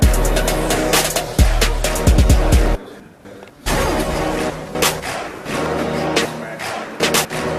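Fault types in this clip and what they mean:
Chunks out of order: 250 ms blocks play in the wrong sequence, one block late at 3.0–3.5 s and 4.5–5.0 s, three blocks late at 6.25–7.25 s, giving jumbled moments. Unlike a dropout or repeat, nothing is lost or doubled.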